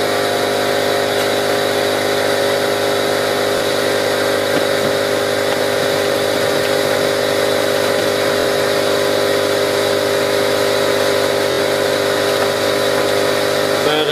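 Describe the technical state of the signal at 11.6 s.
A repeated buffer spans 11.52 to 11.59 s. A 23 ms block, which fits a 1024-sample buffer, plays three extra times, producing a stutter that shows as identical waveform slices with hard vertical joins.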